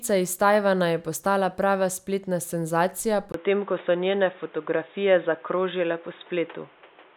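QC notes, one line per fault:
3.32–7.17 s, input switched to a poorer device: after a 20 ms gap at 3.32 s the speech turns dull and boxy, with nothing above 3.8 kHz. The level shifts by roughly 5 dB and a new background noise sits around 30 dB below the speech, most likely because capture moved to another microphone or a headset call profile. Unlike a simple filter or codec bandwidth drop, tone, level and noise floor all change together and stay changed.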